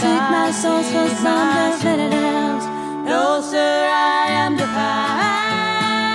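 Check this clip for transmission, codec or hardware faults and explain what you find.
No fault can be heard anywhere in the clip. There is nothing here that calls for an explanation.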